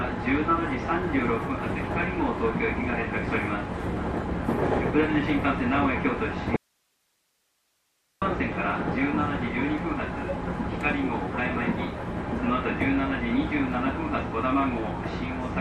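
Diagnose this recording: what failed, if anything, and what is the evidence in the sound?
Audio dropout to a faint residue from 6.56 s to 8.22 s: the sound cuts out abruptly and returns just as suddenly about 1.65 s later, with no fade at either edge. The gap holds only hiss, roughly 45 dB below the normal signal level. The cause is likely a break in the signal path ahead of a stage that kept running, so the stages after the break went on passing their own noise while the wanted signal was missing.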